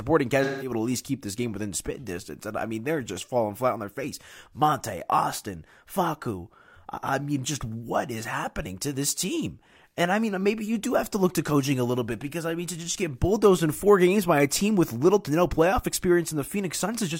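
At 0.44 s the speech breaks up with AAC frame loss with concealment. It lasts until about 0.72 s. Around 170 ms of coded audio never arrived, which fits roughly four lost frames. The decoder covered the gap by reusing the last good spectrum. It could not rebuild the real signal. The patch sounds smeared, noisy and phasey. Clean sound then resumes.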